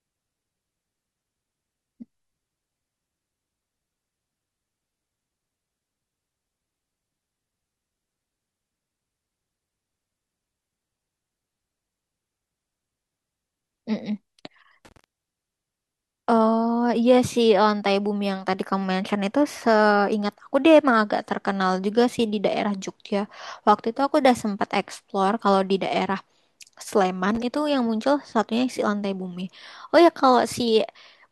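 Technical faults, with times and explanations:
14.85–15.04 s and 27.35–27.43 s, loose connector crackle: short, irregular bursts of scratchy crackle as a worn contact rapidly breaks and remakes the signal path.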